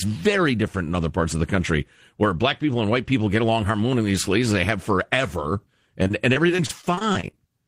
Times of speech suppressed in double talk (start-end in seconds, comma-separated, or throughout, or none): none